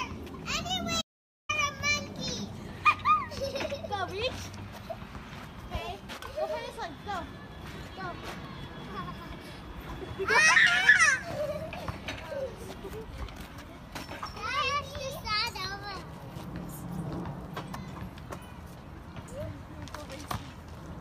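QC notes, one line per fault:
1.02–1.49 s, audio dropout to silence: the input signal was most likely lost for a moment, through a disconnected device, a broken link or an accidental mute, while the recorder kept writing zeros. The sound cuts off abruptly and returns just as suddenly about 0.48 s later. The gap is silent with no room tone or background underneath, and whatever occurred during that half-second is missing from the recording.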